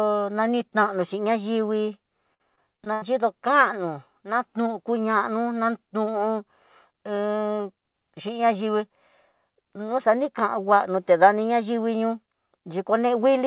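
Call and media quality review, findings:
Repeated packet loss (robotic sound), 2.34–3.04 s, after "nanitanixhi nayingui": five gaps up to 78 ms, patched by extending prior audio. Choppy, pieces missing until "kano nanuyukuña nú nan". Jitter buffer/concealment.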